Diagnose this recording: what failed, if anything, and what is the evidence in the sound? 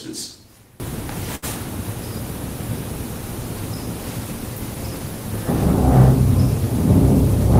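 For the first 0.8 s the sound collapses by about 21 dB, leaving only a faint copy. That's the signature of one channel inverted: whatever's common to both sides cancels in the mono sum. Most likely a polarity swap in the analogue wiring.

Around 1.35 to 1.44 s there's a short stall from a late packet. The sound hangs on itself for about 71 ms, then picks up where it left off. The jitter buffer ran dry waiting on the network, and nothing's actually lost.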